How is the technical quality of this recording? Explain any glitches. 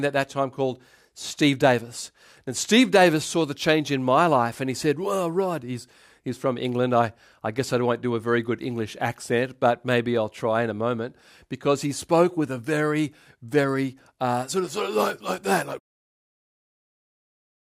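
No glitches can be heard in this speech recording. Near the end, at about 16 s, the level fades out smoothly, with no click or hard edge.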